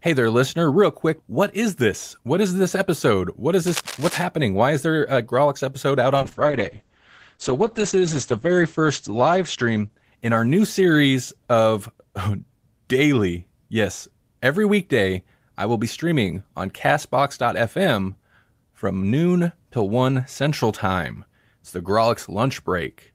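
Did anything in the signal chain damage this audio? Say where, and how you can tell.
Yes. Cable scratch noise appears from 3.67 to 4.23 s, in the analogue wiring stage. For just over half a second, dense, ragged bursts of crackle sit over the speech at roughly ten decibels below it. That uneven, rustling texture points to a worn connector, cable or control being moved, with its contact resistance jumping about and injecting noise into the line. That physical contact fault is the likely cause.

A call bitrate drop follows from 6.16 to 12.89 s, just after "episode out", arising in call processing and the codec. The top end collapses from a full band reaching 20 kHz down to an 8 kHz ceiling, and the speech turns muffled and rough, worst for about 1.9 s. That fits the encoder being told to fall from around 40 kbps to about 9 kbps after the call's bandwidth estimate dropped, coding more coarsely and discarding high frequencies until it recovers.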